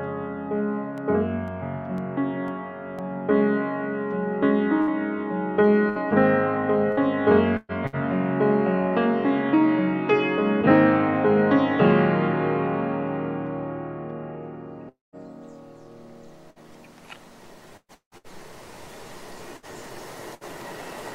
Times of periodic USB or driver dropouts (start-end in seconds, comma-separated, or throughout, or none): 0.98-2.99